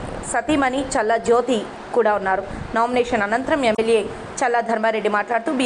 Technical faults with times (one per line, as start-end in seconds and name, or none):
3.72-3.79 damaged data in a compressed stream